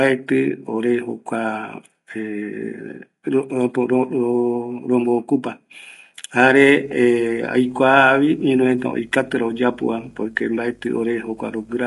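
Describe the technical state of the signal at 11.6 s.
At 11.6 s the signal carries two faults. Video or display buzz runs from 6.84 s to the end of the clip. A screen or video cable is coupling into the audio path, producing a 50 Hz buzz at the picture's field rate with a hash of harmonics above it, plus a 15.6 kHz whine at the line rate. The buzz sits about 30 dB below the speech.

Underneath, the speech has a rough, grainy texture with noise filling the gaps between harmonics and nothing above 11.5 kHz. This is most likely low-delay AAC compression (AAC-ELD) at around 32 kbps. Its short frames resolve pitch harmonics poorly, and at that rate the encoder cannot spend enough bits, so the voice turns coarse and the top band is cut away.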